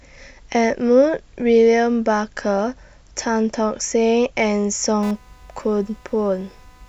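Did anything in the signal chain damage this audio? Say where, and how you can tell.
Yes. Computer activity noise enters from 5.03 s and runs to the end of the clip at 6.88 s, in the analogue wiring. It is a buzzy, chirping rasp pulsing a few hundred times a second and sitting well below the speech. Its rhythm is independent of the talker, which marks it as interference. The computer's changing load drags the ground shared with the audio circuit, and the ground noise rides into the signal as that buzz.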